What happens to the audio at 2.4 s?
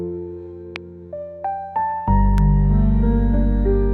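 A single loud pop sits on top of the audio from 2.38 to 2.40 s, peaking at around 10 dB above the surrounding signal, while the sound carries on unbroken underneath it. The likely cause is a sudden electrical step or pulse entering the signal path, from a plug, a switch, static discharge or a driver glitch, which the downstream circuitry shapes into a brief, sharp transient.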